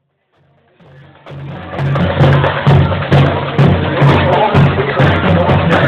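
No technical faults are audible.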